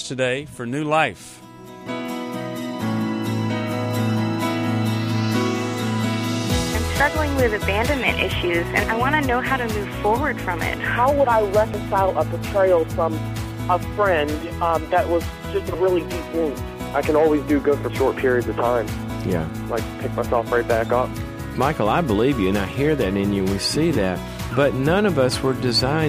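Dropped buffer (overrun) at 7.00, 11.74, 15.74 and 19.10 s: each is a jump as the sound skips ahead, likely from samples overwritten before being read, skipping tens of milliseconds.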